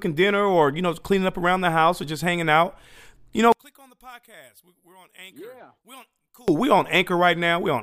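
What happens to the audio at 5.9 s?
One channel inverted, from 3.52 s to 6.48 s, so 5.9 s falls inside it. The collapse is likely caused by one stereo side having its polarity flipped: when the two channels are summed to mono, everything they share cancels out. The centred speech nearly disappears, dropping by about 30 dB, and only a faint residue of whatever differs between the channels remains until the level returns at 6.48 s.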